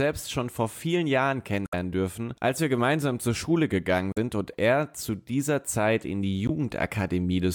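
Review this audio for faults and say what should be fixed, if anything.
Short glitches break into the speech at 1.63–1.73 s, just before "dürfen als wir gemeinsam", at 4.12–4.18 s, before "und er zu dieser", and at 6.46–6.50 s, after "in die". This is damaged data in a compressed stream: corrupted bytes make the decoder misread frames and lose sync until it finds the next valid header. To prevent it, re-fetch or re-encode from an intact source and verify file integrity with checksums after transfer.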